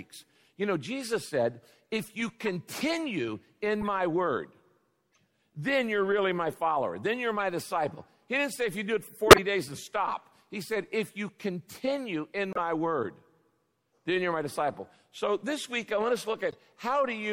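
The whole recording sounds watery and swirly, with dull, cut-off treble and smeared attacks. This is likely MP3 compression at a low rate, plainly audible and consistent with about 64 kbps. A spectrogram would show a hard ceiling on the high frequencies and patches of energy flickering on and off from frame to frame. Corrupt frames decoded anyway add brief chirps and bursts of noise at 2.45–2.48, 3.81–3.87, 5.13–5.17, 7.39–7.44, 9.27–9.39, 12.52–12.58 and 16.49–16.55 s. Each damaged stretch spans one to a few frames, with energy placed at the wrong frequencies. The event at 9.27 s is loudest, peaking around -5 dBFS, while the one at 5.13 s is much fainter, around -55 dBFS. These appear as short vertical smears on a spectrogram and as spiky bursts on the waveform.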